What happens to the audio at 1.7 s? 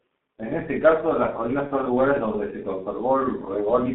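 VoIP packet loss concealed by the speech codec, 1.67 to 1.72 s, between "ese caso las colinas" and "son lugares donde se": a gap that fits one lost 30 ms frame is filled by extrapolating the last pitch and filter with falling gain, giving a brief, stretched buzzy tone or coloured noise that fades.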